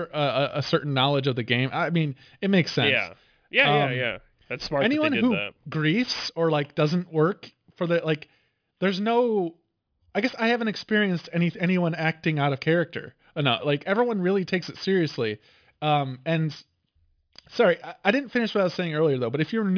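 Aliasing runs through the whole clip. The speech was brought down to a lower sample rate with no filter first, which fits a drop from 44.1 kHz to 11 kHz. Everything above the new limit of 5.5 kHz folds back below it at wrong, unrelated pitches. The folded energy sits about 25 dB under the speech. Sibilants sound gritty and metallic. The spectrum stays full right up to 5.5 kHz, then stops.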